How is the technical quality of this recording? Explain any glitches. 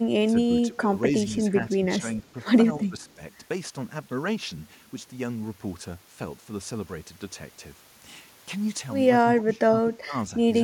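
The recording has level dips and one faint echo, both traceable to echo cancellation on a call.

Speech suppressed in double talk: at 0.32–0.49, 0.68–0.81, 1.76–1.81, 1.99–2.28, 2.77–3.20 and 9.22–10.14 s the speech ducks by roughly 5 to 20 dB, deepest and longest near the end. It is likely the echo canceller turning down both its own talker and the loudspeaker echo while both sides spoke.

Echo leak: around 3.1 s a very faint copy of the speech trails about 222 ms behind, likely residual loudspeaker pickup that the loudspeaker side's canceller failed to remove.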